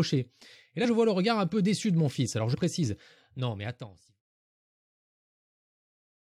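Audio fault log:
0.84–0.86 s and 2.53–2.56 s: compressed frames skipped. About 50 ms drops out, before "je vois le regard" and after "de mon fils alors". The audio jumps ahead by the length of the missing frames.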